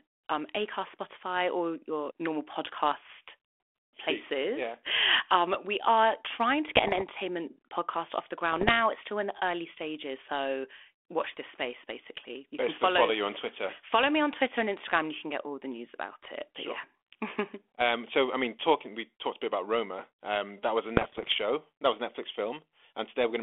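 Bit errors on an ADPCM link strike at 6.69–7.05 s, 8.52–8.71 s and 20.96–21.35 s, at a rate of around one percent. Each flipped bit derails the decoder's step size and predictor, so the light telephone-band G.726 sound turns into pops and rough bursts that ring briefly. On the waveform these show as jagged spikes and level jumps, and on the spectrogram as broadband vertical smears capped near 3.4 kHz.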